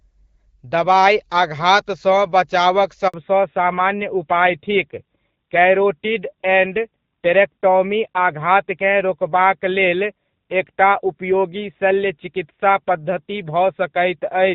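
At 3.08 s the speech cuts out for about 60 ms, until 3.14 s. This is a handover gap: while the call switched networks, no speech frames arrived, so the signal decays almost at once and stays silent until the new link carries audio.

From 3.14 s to the end, the call shows a fallback to narrowband. The light HD Voice coding heard before the gap, consistent with AMR-WB around 12.65 kbit/s, gives way to a band-limited sound with nothing above 4 kHz. The speech becomes duller and rougher, which fits AMR-NB at about 7.4 kbit/s.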